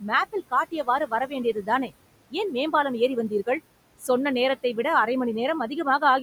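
Noise suppressor artifacts run through the whole recording. The suppressor estimates the steady room noise, which sits about 17 dB below the speech, and pulls those frequency bands down frame by frame, by about 21 dB where nothing else is present. As a result the background drops away in the gaps between words and comes back up underneath them, so the noise floor pumps along with the speech instead of holding level.

Speech cut by the noise suppressor occurs twice. From 1.07 to 1.32 s the gain falls by up to about 13 dB, and from 1.53 to 1.69 s by up to about 11 dB. In each span roughly a tenth of a second of speech is affected. The suppressor misreads low-level speech energy as noise and attenuates it along with the background, so those short stretches sound swallowed and faint.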